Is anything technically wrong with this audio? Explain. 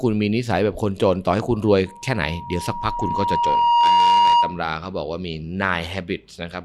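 Yes. From 1.86 s to 4.65 s there is loudspeaker feedback squeal. A microphone is picking up the loudspeaker it feeds, and at 949 Hz the gain around that loop exceeds one, so that frequency reinforces itself on each pass. It swells over about two seconds into a steady whistling tone that rises to roughly 10 dB above the speech and sits on top of it until it stops at 4.65 s.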